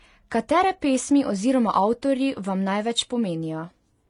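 Throughout the speech, nothing comes through above 11.2 kHz, and two different kinds of codec smear overlap. That's likely transcoding between lossy codecs, Vorbis then HE-AAC.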